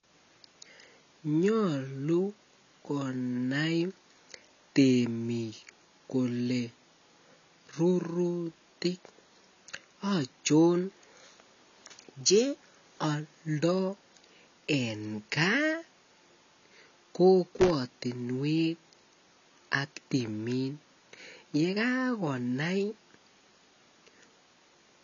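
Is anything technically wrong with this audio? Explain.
Yes, two problems can be heard.

Throughout the clip, the speech sounds dull and smeared. Nothing is present above about 6.9 kHz. Sibilants have a fizzy, warbling texture. The damage is plainly audible. The likely cause is AAC compression, specifically AAC-LC at a low bitrate, roughly 24 kbps. At that rate the encoder lowers its cut-off and quantises the remaining frequency bands coarsely. That leaves gaps and rough noise where detail should be.

From 17.57 to 17.70 s there is a short burst of loose connector crackle. It lasts about 0.14 s. It sounds like irregular crackle and scratching laid over the speech. A worn or dirty contact was making and breaking as it moved. Each break chopped the signal. Any DC on the line turned those breaks into pops.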